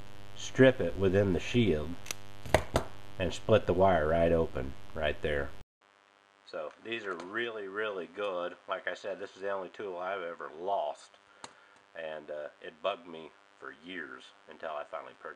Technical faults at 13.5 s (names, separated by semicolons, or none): mains buzz; input switched to a poorer device